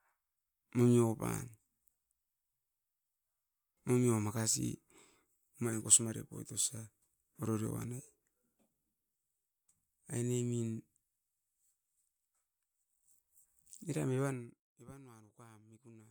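A fast ticking buzz rides on the speech from 14.21 to 14.67 s as the level drops by roughly 25 dB, a textbook case of zipper noise. The fade is being applied in 1 dB steps, about a hundred each second, with no smoothing between them. Every jump puts a tiny discontinuity into the waveform, and at that rate the clicks fuse into a zipping texture.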